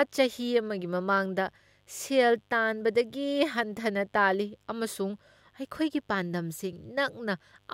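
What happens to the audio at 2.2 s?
Mains buzz runs through 2.2 s, as it does across the whole clip. Sharp switching spikes tied to the 50 Hz supply, arriving twice per cycle, add a ladder of harmonics reaching into the kilohertz range, heard as a steady, raspy buzz sitting well below the speech.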